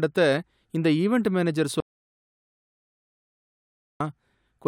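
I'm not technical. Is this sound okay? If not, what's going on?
No. After "இந்த ஈவென்ட் மேனேஜர்", the speech cuts off at 1.80 seconds. It returns at 4.00 seconds. This is an audio dropout to silence. For 2.2 seconds there is total silence, with no background sound at all. Anything said then is lost. The likely cause is a lost input.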